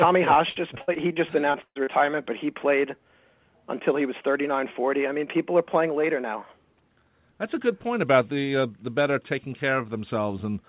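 Repeated packet loss (robotic sound) runs from 0.34 to 1.89 s. Nine separate gaps fall inside this stretch, adding up to about 380 ms of missing audio, the longest about 115 ms. Each hole is patched by stretching the preceding sound forward, so roughly a quarter of the span is synthetic fill. The result is choppy, with pieces missing. Throughout, nothing sits above 4 kHz, which points to a narrowband G.711 call codec.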